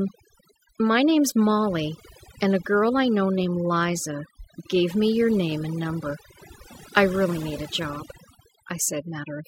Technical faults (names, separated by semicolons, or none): overdone noise removal